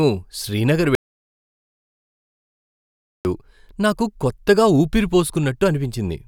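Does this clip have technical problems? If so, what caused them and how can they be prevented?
Yes. At 0.95 s the speech cuts off mid-flow and the clip falls into silence, with no room tone at all, until the sound returns abruptly at 3.25 s. This is an audio dropout to silence lasting about 2.3 s, and whatever was spoken in that stretch is lost. The likely cause is the input being interrupted by a loose connection, a failed link or an accidental mute while the recorder kept writing silence. Securing cables and connections, and monitoring the input live, would prevent it.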